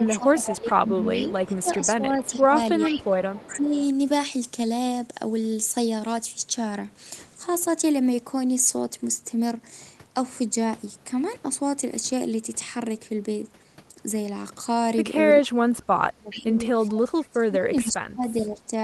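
From 0.0 to 3.75 s the talker's level keeps dipping, by up to about 15 dB at worst and for roughly two seconds in total. This is speech suppressed in double talk, most likely an echo canceller clamping down while both sides spoke at once. Unlike a network dropout, the dips follow the overlap rather than cutting in at random, and the sound thins, fades or cuts out in pieces.

Over almost the same stretch, 0.06 to 3.86 s, a faint second copy of the voice trails the original by 424 ms, about 15 dB below it. This is an echo leak: likely residual loudspeaker pickup that the canceller failed to remove. It differs from the suppression because something extra is heard, a delayed duplicate at a fixed lag, rather than the main voice getting quieter.

The pattern returns from 15.54 to 18.72 s, with suppression deeper this time, up to about 25 dB, again across roughly two seconds in total. Echo leaks with the same 424 ms delay appear at 16.30 to 16.42 s at about 15 dB down, at 16.95 to 17.90 s at about 20 dB down, and as a brief scrap at 18.45 to 18.49 s at about 35 dB down.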